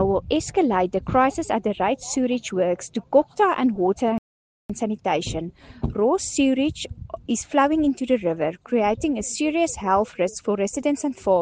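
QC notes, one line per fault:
4.18–4.70 s, rebuffering stall: the player runs out of data, so the sound drops to silence for 0.52 s, then resumes exactly where it stopped. This shows as a flat gap in the waveform and a blank vertical band on the spectrogram.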